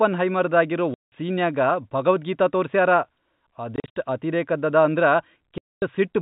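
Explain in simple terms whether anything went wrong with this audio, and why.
The speech drops into sudden silences at 0.94–1.12 s (before "ಸೀನ್ನ್ಯಾಗ ಭಗವದ್ಗೀತಾ ತೋರ್ಸ್ಯಾರ"), in short broken gaps around 3.76–3.91 s (before "ಅತಿರೇಕದ್ದದ ಅಂದ್ರ"), and at 5.58–5.82 s (after "ಅತಿರೇಕದ್ದದ ಅಂದ್ರ"). This is packet loss filled with silence. Chunks of audio, which sound like 20 ms pieces, never arrived, and the receiver played nothing in their place.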